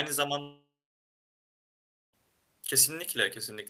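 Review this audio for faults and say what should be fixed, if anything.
From 0.41 s to 2.15 s the speech drops out. The last sound stretches into a fading buzz, then there's about 1.4 s of near silence, and when the audio returns roughly 1.7 s is gone. That's a long network dropout, likely caused by the receiver filling a gap where no packets arrived. To prevent it, use a steadier connection with enough jitter buffering and retransmission or redundancy so a burst of packet loss doesn't wipe out whole stretches.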